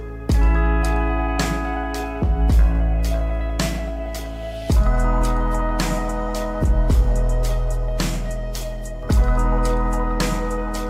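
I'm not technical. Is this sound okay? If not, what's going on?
Yes, nothing wrong here.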